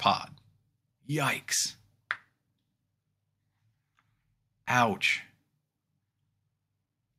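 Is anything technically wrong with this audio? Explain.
No, nothing technically wrong turns up in this audio on listening.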